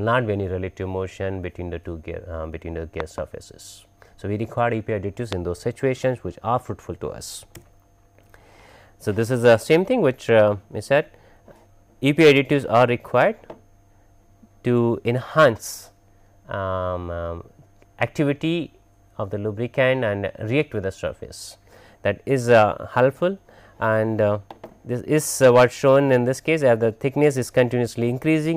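At 3.00 s there's a loud pop, actually a quick pair of them running to about 3.20 s, and another single pop at 5.33 to 5.35 s. Each one jumps roughly 15 dB above the surrounding sound, which carries on underneath. The likely cause is a sudden voltage step or spike, from something like a plug, a switch or a bit of static, getting into the signal and being shaped into a sharp thump.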